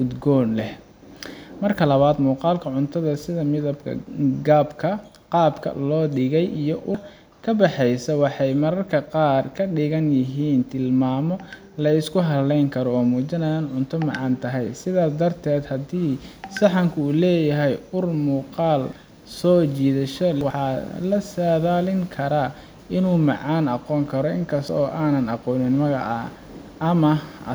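At 6.95 s the speech lurches forward, losing about a third of a second just before "ka baxaysa waxay". The same jump recurs from 18.83 to 18.93 s, losing about a tenth of a second, and from 20.41 to 20.69 s, losing about a third. These are compressed frames skipped: whole coded frames were missing or rejected as damaged, so the decoder jumped ahead.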